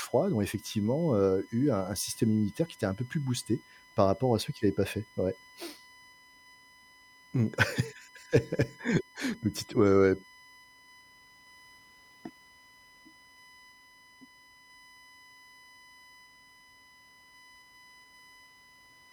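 Right from the start and running the whole way through the speech, there's USB whine sitting underneath. It's a steady, fixed-pitch tone built on 1 kHz, with the second harmonic at 2 kHz actually the loudest part. That spacing is the giveaway: the bus pulls current in 1 ms frames, and that ripple is leaking into the audio through power or ground. It sits roughly 30 dB below the speech.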